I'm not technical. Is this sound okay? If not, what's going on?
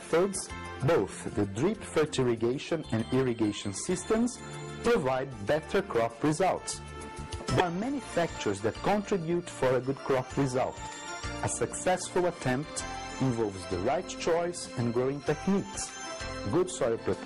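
No. At about 7.56 to 7.61 s there is a brief chirp or blip caused by damaged data in a compressed stream. Part of the file was scrambled, so the player briefly decoded garbage.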